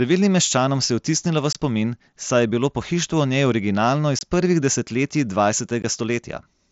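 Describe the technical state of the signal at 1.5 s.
At 1.53 to 1.55 s there is unconcealed Bluetooth headset packet loss. Roughly 22 ms of audio never arrived from the headset, which fits three consecutive 7.5 ms mSBC frames, and nothing was synthesised to cover the gap. The speech drops into a brief hole with hard edges that can tick. On the waveform it shows as a flat stretch with a sheer cut in and out; on a spectrogram, a narrow vertical blank band across all frequencies up to the 8 kHz mSBC limit.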